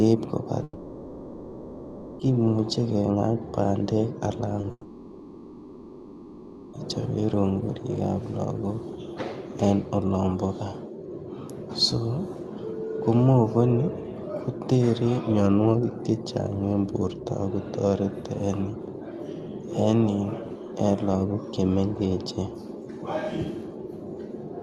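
From 0.63 to 2.21 s there's a long network dropout, likely the connection stalling: about 1.6 s of audio is lost. The receiver keeps stretching the last sound into a fading buzz, and then the audio picks up again later with that stretch missing.

At 4.61 to 4.65 s a short concealed packet loss patches a 20 ms gap by continuing the sound, so you hear a quick smear or wobble. Right after that, from 4.71 to 6.75 s, a second long dropout follows the same pattern. About 2 s goes missing and the stretched sound fades out before the audio comes back.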